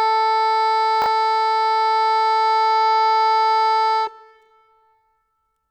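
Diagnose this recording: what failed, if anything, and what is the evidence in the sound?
Chunks out of order at 1.02 to 1.06 s, in the buffer or network stage: a 20 ms block of the music arrives one chunk late and plays after its successor, so the passage jumbles briefly at the three hard joins where the swapped pieces meet.

Time-stretched section from 2.71 s to the end: the music abruptly slows to about 0.56 times its pace while pitch holds, and the slowed passage drags. This is likely software stretching in processing or playback, repeating short fragments to fill the longer duration.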